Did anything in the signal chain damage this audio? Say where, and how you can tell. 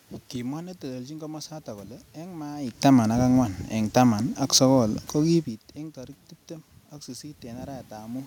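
No, nothing in the signal chain damaged this audio.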